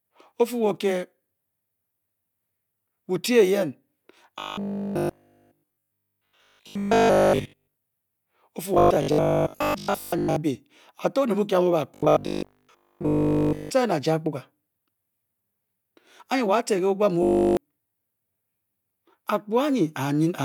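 From 4.39 to 7.75 s, 8.74 to 10.36 s, 11.95 to 13.71 s and 17.23 to 17.57 s the voice turns into robotic sound from repeated short buffers, a rigid metallic buzz at 50 Hz that loosely tracks the speech. The likely cause is audio arriving too slowly, so a 20 ms slice is looped in place of the missing material. The looping covers almost all of the first, third and fourth stretches and most of the second.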